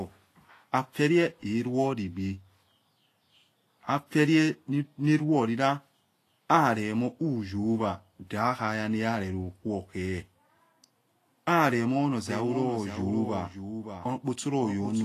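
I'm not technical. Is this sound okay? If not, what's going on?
No. The recording was likely squeezed hard by Vorbis compression, which saves space by discarding fine detail. Throughout the clip, the speech sounds hissy and grainy, the crispest high sounds are missing, and the starts of sounds are blurred.

From 12.28 s to the end, a doubled audio track appears, likely from the sound being picked up a second time through a slower route. A fainter copy of the speech follows about half a second behind, like a flat, sudden echo.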